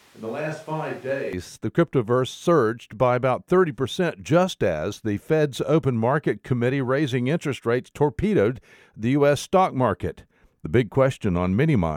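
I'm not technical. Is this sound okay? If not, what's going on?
No. For the first 1.33 seconds, already under way when the clip begins, the speech sounds hollow, roomy, thin and quieter, with more background noise, then snaps back to close and clear. That is a switch to a distant microphone, likely a camera or room mic standing in for the close one.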